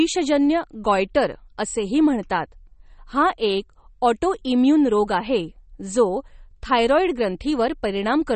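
From start to finish the speech has a watery, swirling quality, with metallic chirps on s sounds and softened, smeared consonant onsets, and nothing is heard above 8.4 kHz. This is likely MP3 compression. Starved of bits, the encoder cut the treble at that fixed frequency and dropped weak frequency lines that flicker on and off from frame to frame. Damage this plain points to a low bitrate, around 32 kbps.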